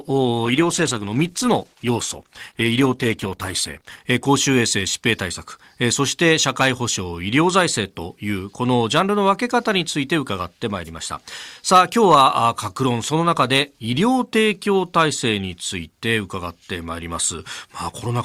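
From 0 to 4.0 s the player runs an adaptive stream starting at a low bitrate, switching up once it has measured the connection. Until then the speech has dull, synthetic treble and strong codec artefacts, fitting Opus at 16 kbit/s. At 4.0 s it jumps without a gap to clearer sound fitting 64 kbit/s.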